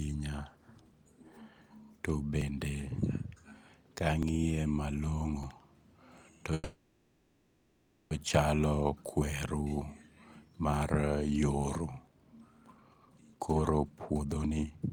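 At 2.42, 4.23, 5.43 and 6.18 s the speech jumps, each time skipping roughly 50 ms. These are dropped buffers (overrun): the recording side likely failed to read its samples before the hardware overwrote them, so a block vanished and the audio on either side was spliced together. There is no gap, only an abrupt jump in the sound.

From 6.54 to 8.12 s comes a call audio freeze. The packets likely stalled, the jitter buffer emptied, and the receiver stretched the last sound into a fading buzz lasting about 1.57 s. It never falls fully silent. When delivery resumed, playback continued where it had stopped, so nothing was lost, but the rest of the clip now runs about 1.57 s later.

At 12.07 s a longer dropped buffer removes roughly 150 ms at once, with a chance of clipping part of a word.

There are also two jitter buffer speed-ups. From 10.45 to 10.99 s the receiver cut short pitch-period slices to shed about 70 ms, playing the speech at 111% with its pitch unchanged. 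From 12.76 to 14.87 s it trimmed more aggressively, around 0.7 s in total, running the speech at 128%, which sounds noticeably rushed.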